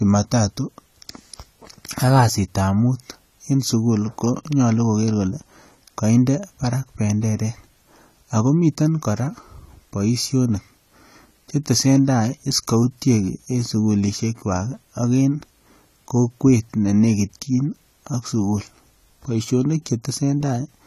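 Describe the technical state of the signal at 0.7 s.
At 0.7 s the speech is dull and smeared. The damage is plainly audible and runs through the whole clip, not just this moment. Nothing sounds above about 14.1 kHz. Sibilants take on a fizzy, warbling texture. The likely cause is AAC compression. An AAC-LC encoder at a low bitrate, around 32 kbps, quantises its frequency lines coarsely. It drops the top band and leaves gaps in the spectrum, which produces this smeared sound.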